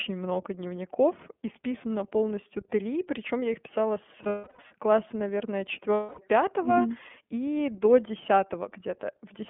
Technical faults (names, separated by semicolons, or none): iLBC codec; lost iLBC frames